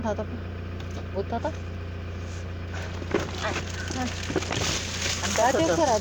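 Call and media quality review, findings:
Nothing stood out on listening; no findings to log for this audio.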